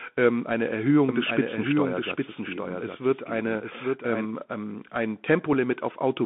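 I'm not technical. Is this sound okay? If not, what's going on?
No, there are three problems.

The whole clip has gone through a Bluetooth CVSD headset codec. This is the basic way many Bluetooth headsets send speech. It keeps only a narrow slice of sound, up to about 3.5 kHz. So the speech sounds thin and muffled, like a phone call. The codec tracks the sound only roughly. That leaves a grainy hiss underneath, and s sounds come out scratchy.

From 1.09 to 4.25 seconds there is a doubled audio track. A second copy of the same speech plays about 0.7 seconds behind the first. It is somewhat quieter, but clear and full, with no room echo. That is why you hear the same words twice, out of step. It starts and stops abruptly. This likely happened because the same sound was recorded twice through a slower path.

At 5.53 seconds there is unconcealed Bluetooth headset packet loss. A tiny piece of sound, about 4 milliseconds long, never arrived from the headset. 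Nothing filled the gap, so the speech drops out for an instant. You may hear it as a small click or tick.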